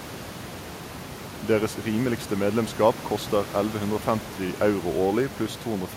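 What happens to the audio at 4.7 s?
Nothing goes wrong at 4.7 s: the speech continues intact, with only the room's own background noise, about 15 dB below the speech, audible beneath it.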